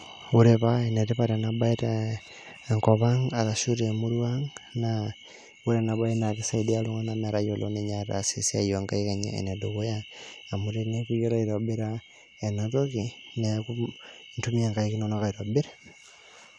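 No technical fault can be heard anywhere in the speech. There is nothing in it to place on a timeline.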